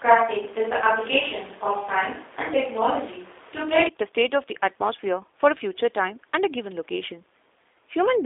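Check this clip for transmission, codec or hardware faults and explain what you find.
A single fault runs through the whole clip: G.729 codec coding. The speech is rebuilt from a vocal-tract filter, pitch predictor and sparse pulses, consistent with an 8 kbit/s codec, so it sounds plainly rough and synthetic. A spectrogram shows energy confined to 300 Hz to 3.6 kHz, empty above 3.7 kHz.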